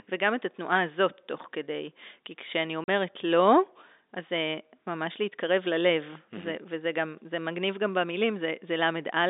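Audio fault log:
2.84–2.88 s, packet loss filled with silence: the receiver failed to get a stretch of the speech stream and, with nothing to conceal the gap, played dead silence in its place for 40 ms, which fits two 20 ms packets going missing. The speech drops out abruptly, and the waveform is cut off and restarted mid-cycle rather than faded, leaving hard edges on the hole. The narrow telephone band of the G.711 line stays audible on either side of the gap.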